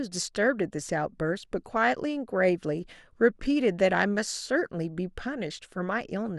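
Speech recording with no technical fault to be heard anywhere in it. Nothing in the signal chain draws attention to itself at any point.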